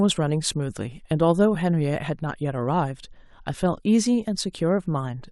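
No technical faults are audible.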